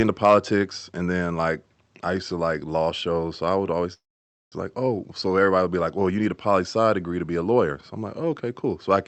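It's a speech recording that's come through a call path, with the top end stopping around 8 kHz, which fits an Opus-style call codec. Right at the start, from 0.24 to 0.37 s, just before "and then like I", there's hard clipping: the peaks were pushed about 3 dB past what the stage could pass, so they're sliced flat. That adds a bit of crackly edge on those loud bits rather than a full fuzz, since the overload is fairly mild. The other issue sits between "shows so I would" and "like oh", from 3.93 to 4.54 s. That's a call audio freeze. The audio hangs for roughly 0.6 s, a brief tail of held-over sound and then about half a second of silence, before picking up exactly where it left off, so nothing is actually lost, just delayed. The likely cause is packets getting held up in transit so the jitter buffer ran dry and had to stretch the last bit of sound while it waited.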